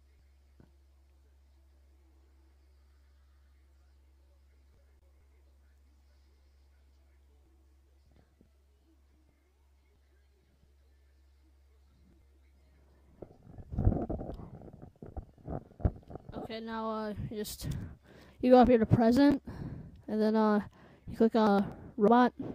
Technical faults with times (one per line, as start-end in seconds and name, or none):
4.99-5.02 gap at a join of encoded pieces